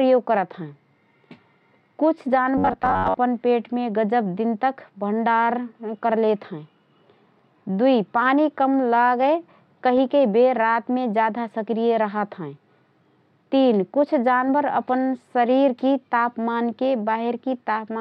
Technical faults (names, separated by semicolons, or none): robotic sound from repeated short buffers